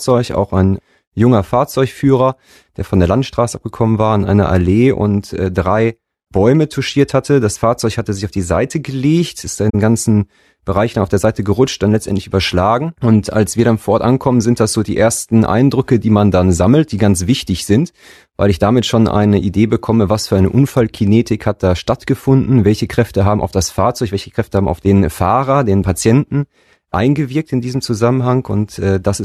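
At 9.69 s, just after "gelegt ist", the speech is briefly disrupted for about 57 ms, to 9.75 s. This is a corrupt frame concealed: flipped bits in the AAC stream were detected, and the decoder papered over the damaged stretch itself rather than playing garbage. The gap's length fits two lost frames.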